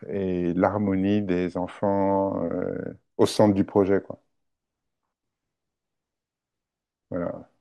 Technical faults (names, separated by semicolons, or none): none